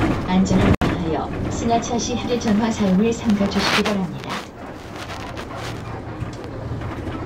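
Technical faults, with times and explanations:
0.75–0.82 s, gap at a join of encoded pieces: the sound drops into a 68 ms gap with codec-smeared edges, then resumes mid-flow, because separately encoded segments were butted together with encoder delay and padding left in.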